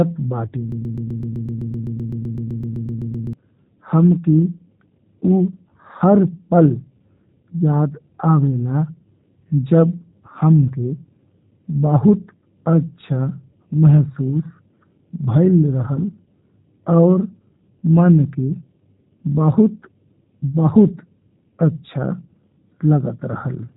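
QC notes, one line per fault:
Throughout: G.729 codec. The whole clip has gone through this 8 kbit/s VoIP codec, and the damage is easy to hear. Nothing above about 3.8 kHz survives, so the top end sounds dull and boxy. The codec rebuilds each short frame from a vocal tract model, a pitch predictor and a few pulses rather than sending the real waveform, which is why the speech has that rough, slightly synthetic buzz.
0.72 to 3.33 s: broken-record loop. A chunk about 127 ms long plays back to back, identically, around 20 times, giving a fast mechanical stutter for roughly two and a half seconds. The likely cause is a player, encoder or stream stalling and resending the last fragment it had buffered. Whatever should have played during that stretch is gone, not just delayed, so the speech jumps ahead when the loop releases.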